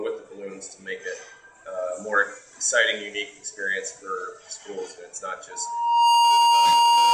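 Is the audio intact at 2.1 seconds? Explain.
Yes, at 2.1 seconds the sound plays through cleanly, with no dropout, click, distortion or other fault.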